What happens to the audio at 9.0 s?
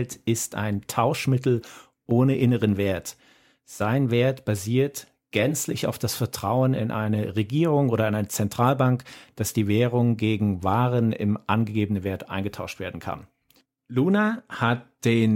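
Nothing goes wrong at 9.0 s; the speech runs on intact through that moment with no dropout, click or distortion.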